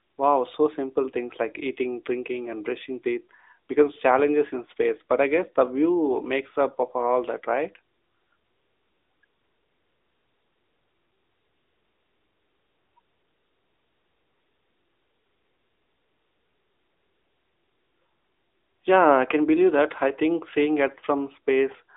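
Right from the start and all the way through, the speech runs through an AMR narrowband mobile codec at around 10.2 kbps. The band is squeezed to roughly 300 Hz to 3.7 kHz, with nothing above 3.8 kHz. The voice comes across plainly buzzy and synthetic, like an old phone call.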